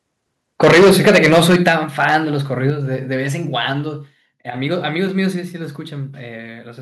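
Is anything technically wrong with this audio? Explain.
Yes, there are two faults. From 0.63 to 2.16 s there is microphone overload: the input gain was likely set too high, driving peaks about 13 dB past the converter's limit. Roughly a sixth of samples are flattened, giving loud speech a harsh, crackling edge. The microphone volume also steps down four times, likely because automatic gain control is reacting to a loud or clipping input: by about 2 dB at 0.64 s, 7 dB at 1.68 s, 5 dB at 2.7 s and 2 dB at 5.76 s, each an abrupt drop in level.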